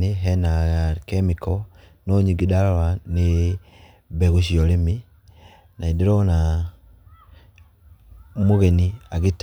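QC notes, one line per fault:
The speech signal shows no audible technical faults, staying steady and continuous throughout.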